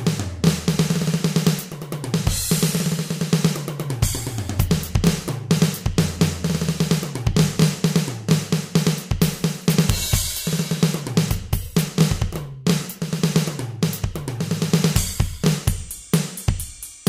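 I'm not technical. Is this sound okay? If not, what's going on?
No. Harsh, violent cracks hit at 1.47, 5.07, 14.96, 15.68, 16.14 and 17.07 seconds, with a longer crackling stretch from 9.9 to 10.14 seconds. This is integer overflow: loud peaks exceeded the largest storable number and flipped to the opposite extreme instead of being capped.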